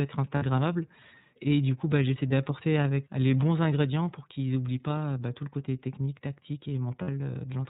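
The whole recording has passed through the iLBC codec, a narrowband VoIP coder that encodes each frame's excitation independently. The sound fits its 13.33 kbps mode with 30 ms frames. Everything above 4 kHz is removed, so the speech sounds dull and boxed-in, and the coding damage is plainly audible as a rough, slightly synthetic buzz over the voice.

Three stretches show lost iLBC frames, where packets went missing and the decoder filled the gap by repeating the last pitch cycle blended with noise. The first, from 0.36 to 0.44 s, covers about 60 ms and is heard as a short, held, buzzy vowel. The second, from 2.28 to 2.32 s, comes after "du coup bah j'essaie" and before "avec les bons ingrédients". It bridges about 30 ms, so the smear is brief. The third, from 7.01 to 7.09 s, follows "le côté technique tactique" and again stretches roughly 60 ms into a breathy, sustained tone. Because each frame decodes on its own, the voice returns cleanly right after every gap.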